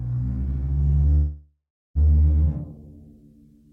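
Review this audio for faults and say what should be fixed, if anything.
Call audio freeze at 1.15–1.98 s: the music stalls into a decaying buzz, then about 0.35 s of silence, resuming intact, likely from late packets draining the jitter buffer. Prevent it with a larger adaptive jitter buffer and a more stable network path.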